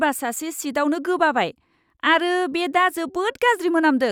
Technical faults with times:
none

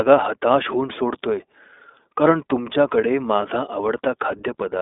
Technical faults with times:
0.00-4.81 iLBC codec

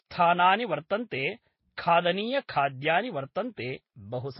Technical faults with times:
0.00-4.39 transcoding between lossy codecs

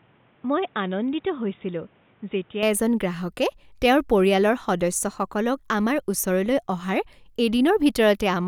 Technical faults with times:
0.00-2.63 input switched to a poorer device

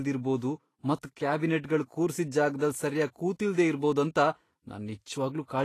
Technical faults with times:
0.00-5.64 Vorbis compression

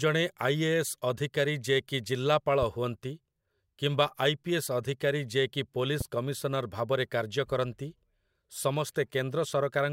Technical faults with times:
6.01-6.03 loud pop

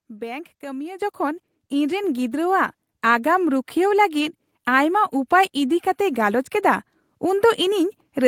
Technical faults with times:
1.02 microphone volume stepped up
2.04 microphone volume stepped up

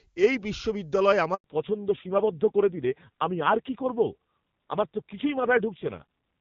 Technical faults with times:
1.34-1.44 handover gap
1.44-6.41 fallback to narrowband

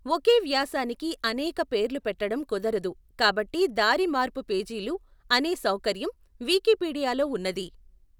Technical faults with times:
none

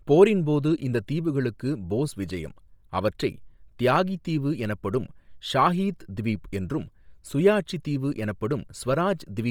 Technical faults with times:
0.00-9.51 Bluetooth LC3 compression

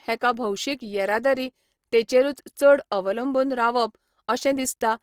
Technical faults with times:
0.00-5.03 Opus compression

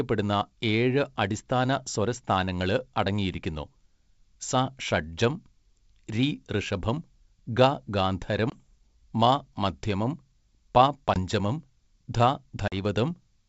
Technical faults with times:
8.50-8.57 packet loss on an ADPCM call
11.14-11.19 packet loss on an ADPCM call
12.68-12.73 packet loss on an ADPCM call

